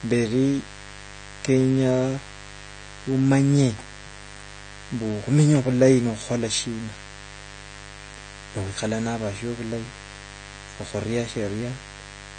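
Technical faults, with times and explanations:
throughout, mains buzz: a steady, raspy buzz about 20 dB below the speech, from switching spikes twice per 50 Hz cycle spreading harmonics into the kilohertz range.
throughout, AAC compression: plainly dull, smeared speech with fizzy sibilants, likely from AAC-LC coding at a low bitrate, consistent with around 32 kbps, which lowers the cut-off and leaves spectral holes.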